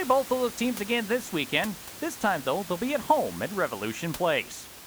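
There are no technical faults in this speech clip; the only background is ordinary room noise sitting about 15 dB below the speech.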